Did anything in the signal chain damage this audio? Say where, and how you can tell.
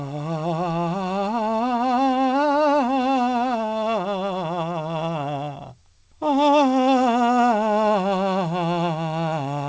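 No, nothing in the chain damaged this music: it came over a WebRTC call path, and the missing content above 8 kHz is simply that link's band limit, consistent with a wideband codec such as G.722 at 64 kbps.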